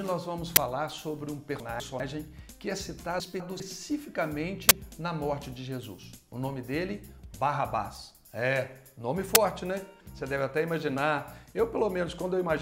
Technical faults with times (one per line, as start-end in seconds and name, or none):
0.56 uninitialised buffer
1.60-2.00 chunks out of order
3.20-3.60 chunks out of order
4.69 uninitialised buffer
9.35 uninitialised buffer